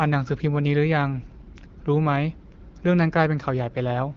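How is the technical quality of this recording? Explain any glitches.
Nothing in this speech recording stood out as a glitch on listening, with the wideband AMR-WB coding at 12.65 kbit/s leaving the speech clear.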